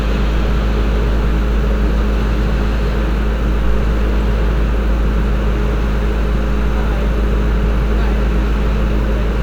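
No technical fault can be heard anywhere in the sound; the signal holds steady and continuous throughout, with nothing in it that points to a problem in recording, processing or playback.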